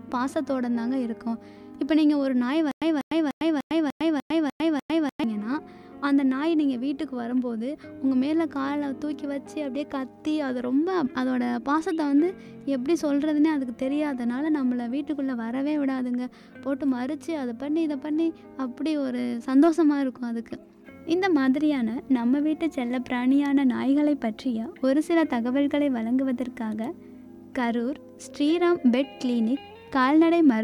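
From 2.71 s to 5.24 s the audio breaks into a stutter with silent gaps. A fragment about 194 ms long plays eight times in a row, each repeat followed by roughly 103 ms of dead digital silence, so the burst returns at a steady 297 ms period. The likely cause is a stalled player or stream that replays its last buffered chunk on each retry and then runs dry. The audio that belonged in that span is lost.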